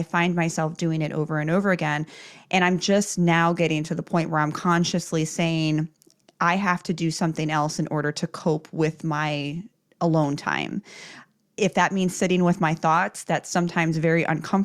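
Nothing in this speech recording stands out as a technical fault; there's simply no problem to point to anywhere along the way.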